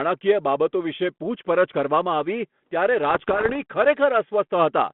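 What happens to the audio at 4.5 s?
Nothing goes wrong at 4.5 s; the speech carries on intact through the narrow telephone band of the 32 kbit/s G.726 ADPCM line, with no dropout, click or added distortion at that moment.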